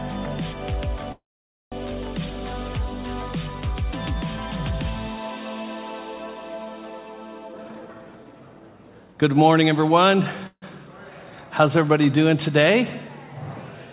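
Audio coming through a call path, band-limited with nothing above 4 kHz as you'd expect from a G.711 mu-law link at 64 kbps. There are two call audio freezes. The first, at 1.12 to 1.74 s, holds the last sound as a fading buzz or hiss that drops to silence for about half a second of its 0.6 s. The second, at 10.47 to 10.64 s, is shorter, about 0.15 s with roughly 60 ms of silence. The likely cause is packets stalling in transit until the jitter buffer ran dry. When playback resumes it picks up where it stopped, so nothing is lost and everything after each freeze lands later. Between 7.45 and 9.30 s there's a jitter buffer speed-up. The receiver trims short pitch-period chunks over and over to shed excess buffered delay, so the sound plays at about 132% speed with its pitch unchanged and comes across as rushed. Roughly half a second gets squeezed out over that stretch.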